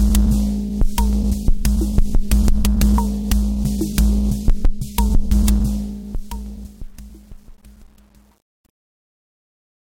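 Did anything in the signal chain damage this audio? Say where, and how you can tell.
Yes, there's truncation distortion on the fade-out, likely from a sample-format conversion or gain stage. From 5.44 s the tail gets gritty, and from 6.49 s to 9.83 s it is at its worst. That fits roughly 9 bits kept with no dither.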